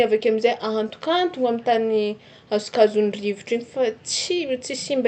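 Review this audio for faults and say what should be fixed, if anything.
No faults found, so nothing here needs fixing.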